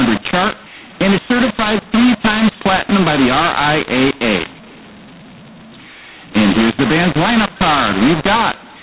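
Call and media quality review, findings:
mu-law and A-law mixed up, throughout: A-law G.711 telephone speech decoded as mu-law, scrambling levels; harsh distortion, quiet passages lifted into noise, pauses filled.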